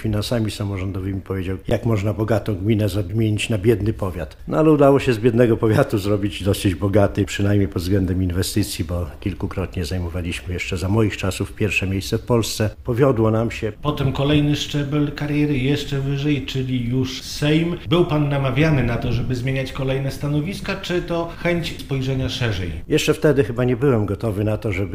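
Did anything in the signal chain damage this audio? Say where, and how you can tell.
Yes. An underrun with held sample hits the playback buffer at 1.70 s. The waveform freezes flat for 15 ms, then resumes. About 15 ms of audio never arrived, so the output jumps across the missing stretch.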